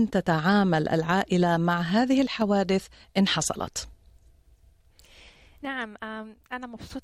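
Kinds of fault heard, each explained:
One channel drops out: the level takes a sudden step down of about 6 dB, first as a short blip from 2.28 to 2.42 s, then for a longer stretch from 5.65 to 6.90 s, and each time it snaps back just as abruptly. A clean drop of that size is what you get when one side of a stereo feed has likely gone missing before the mono sum, so everything both channels shared comes through at half strength.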